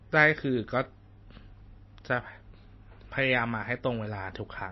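MP3 compression throughout this speech clip: the treble stops at about 5.8 kHz and weak bands flicker, sounding watery, likely from a starved, very low bitrate encode.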